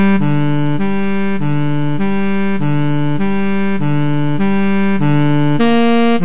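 DC offset runs through the whole clip: the waveform sits shifted away from zero by a constant amount from start to finish. The shift itself isn't heard as a sound, but it eats into headroom on one side of the signal, so peaks reach the clipping point sooner. On analysis it shows up as steady energy at 0 Hz, at the very bottom of the spectrum, while the call path's band limit leaves nothing above 4 kHz.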